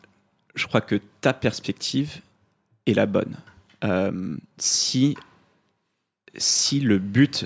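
No technical faults can be heard anywhere in the speech recording. Nothing at any point in the audio needs a timestamp or an explanation.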